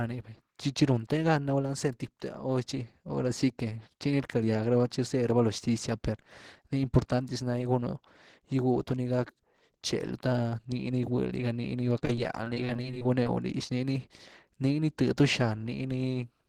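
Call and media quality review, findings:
Repeated packet loss (robotic sound), 11.93–13.26 s: choppy speech from about twenty short concealed holes, none over 17 ms; recurring patching, unlike one isolated dropout. Probable component: network path.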